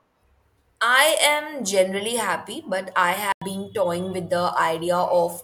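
At 3.32 s the speech drops into a sudden silence that lasts until 3.42 s, about 94 ms. This is a corrupt frame muted. Damaged bits reached the decoder, it rejected the frame, and the player filled the gap with silence. The hole begins and ends abruptly, with no fade. Its length points to a single lost frame of roughly that size. Timing holds, and the speech resumes exactly where it should.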